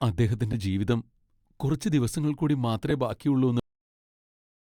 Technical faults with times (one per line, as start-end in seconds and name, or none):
0.52-0.60 frames out of order
2.90 frames out of order
3.60-4.64 cut-off end